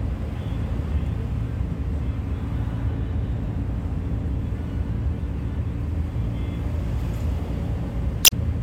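It's a clip of everyday sounds, and right near the end, from about 8.22 to 8.32 s, there's a brief garbled blip from damaged data in the compressed stream. The decoder hits corrupted bytes, can't read those frames cleanly, and loses sync until it picks up a valid frame again.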